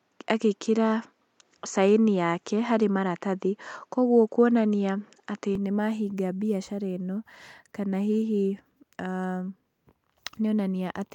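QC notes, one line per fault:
0.00–5.55 s, input switched to a poorer device: nothing above 7.6 kHz and a faint extra noise floor make it sound a bit dull, then at 5.55 s the top end opens up with no gap or level jump, likely the input moving to a better mic.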